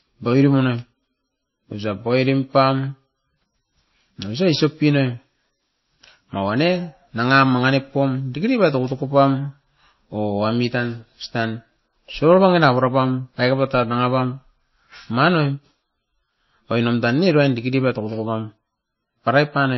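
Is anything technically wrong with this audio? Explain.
Yes. The speech carries plainly audible MP3 compression damage for the whole clip. Nothing is heard above 5.8 kHz, so the top end sounds dull and closed in. The cause is likely an MP3 encode at a very low bitrate, around 23 kbps. With so few bits, the encoder cuts the treble at a fixed point. It also drops quiet frequency detail that flickers from frame to frame. That gives a watery, swirly texture, metallic chirps on s sounds, and smeared attacks.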